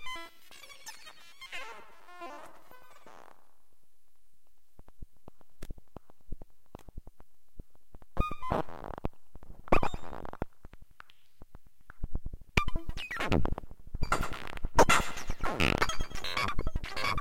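Listening through the recording, nothing in the sound stood out as a technical problem at any point.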